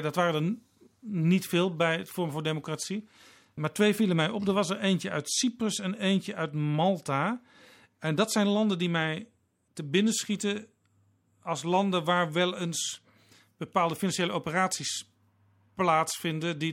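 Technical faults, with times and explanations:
No technical faults stood out on listening to this speech recording.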